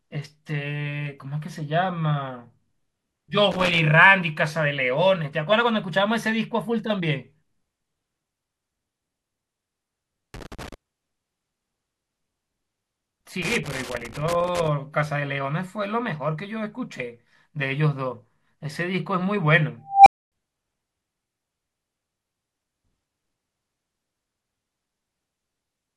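Speech with three bursts of loose connector crackle, at 3.51–3.79 s, 10.34–10.74 s and 13.42–14.68 s: a worn contact chopping the signal, seen as ragged spikes and broadband vertical streaks. At 19.88 s an unstable filter produces a tone near 700 Hz that swells over about 178 ms into clipping. By 20.32 s it overflows into roughly 257 ms of silence, showing as a bright horizontal line, a flat-topped waveform, then an empty gap.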